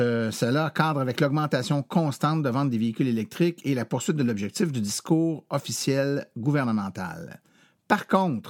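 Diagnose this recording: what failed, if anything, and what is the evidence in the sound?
Nothing failed: across the speech there is no audible evidence of a fault at any stage from capture to playback.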